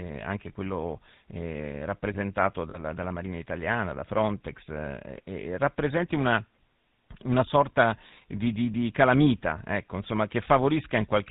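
Speech runs through the GSM full-rate codec for the whole clip, and the damage is plainly audible. The codec rebuilds the voice from a vocal-tract model driven by a sparse pulse train. Only every third excitation sample survives. The result is a buzzy, gravelly roughness in the voice. Nothing above 4 kHz gets through, so the sound is dull. The coarse texture fits the old 13 kbps full-rate mode. At 2.7 s, right after "anche quello rappresentato", lost GSM frames interrupt the audio until about 2.79 s. The gap is about 40 ms, which points to two consecutive bad frames. The decoder fills it by repeating the last good frame. The sound is briefly frozen into a short metallic ring. The loss is too short to fade fully to silence before normal decoding resumes.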